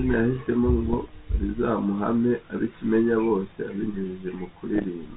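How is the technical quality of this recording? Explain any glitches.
The speech carries two short glitches over a telephone-band ADPCM path, with nothing above 4 kHz and a light coding texture consistent with 32 kbit/s G.726.

Bit errors on an ADPCM link, at 0.90 to 0.97 s and 4.75 to 4.89 s: flipped bits, a small fraction of a percent, corrupt the decoder's adaptive step size and prediction, so each error rings briefly as pops, rough bursts and momentary level jumps, heavier in the second.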